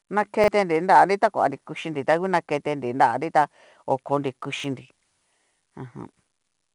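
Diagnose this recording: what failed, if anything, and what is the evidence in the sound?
At the codec stage, 4-bit ADPCM compression coded each sample as a coarse step from a prediction. This leaves a plainly audible gritty hiss that tracks the speech level. Nothing survives above 10.7 kHz, which points to a sample rate near 22 kHz and about 88 kbps.

In the driver buffering, audio arrived late and the last buffer was played again. This repeated buffer occurs at 0.44–0.48 s and at 4.6–4.64 s, just after "ta okonri". Each time a 40 ms slice sounds twice with hard joins, a brief stutter, and about 40 ms of audio is lost.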